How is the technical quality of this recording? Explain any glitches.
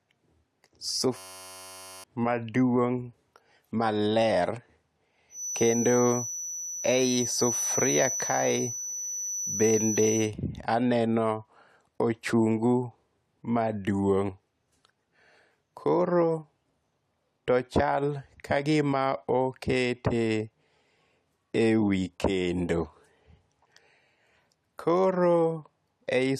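Two real problems stand out in this speech recording: a brief system hang loop near the start and a feedback whistle a few seconds later.

From 1.17 to 2.04 s there's a system hang loop. The machine or its driver stalled while the sound hardware kept replaying the same tiny stretch of its buffer, about 10.67 ms long, which fits a 512-sample buffer. Repeating at 93.8 Hz, it comes across as a flat, steady buzz, and roughly a second of real audio is gone.

From 5.28 to 10.33 s a thin feedback whistle sits at 6 kHz, just a few dB under the speech. The likely cause is the speaker-to-mic loop hovering right at the edge of feedback, so that one tone rings on without ever blowing up. You hear it as a thin whine at one pitch that slowly swells and fades behind the speech.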